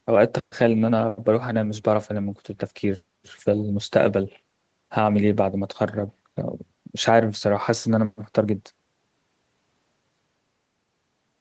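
No technical faults can be heard in this speech; the band tops out around 8 kHz, as expected from the call microphone processing and the Opus coding on the WebRTC call path, and nothing disrupts the signal along the way.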